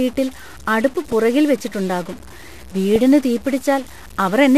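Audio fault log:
throughout: stuck bit. Distortion rides on the speech, and the pauses fill with a steady hiss instead of going quiet. This is likely one data bit frozen at 0 or 1, so about half the samples are off by that bit's weight.
throughout: MP2 compression. The speech sounds dull and muffled, with a gurgling, granular roughness and upper frequencies that come and go. This is likely MPEG Layer II coding starved of bits, which fits a low rate near 80 kbps, with upper sub-bands switched off and the rest coarsely quantised.
1.12–1.14 s and 2.96–3.02 s: DAB burbling. Two brief bursts of burbling, the second one longer. Bit errors in a small fraction of the data got past error correction, so corrupted samples put short blips of noise in single sub-bands and wrong scale factors make sub-bands jump in level for up to a frame.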